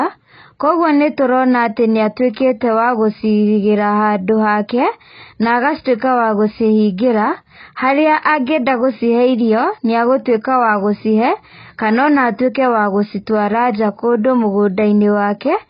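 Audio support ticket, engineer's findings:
Speech dull and swirly the whole way through, nothing above 5.1 kHz. Likely AAC compression at a very low bitrate, around 16 kbps, with heavy smearing and warble on sibilants.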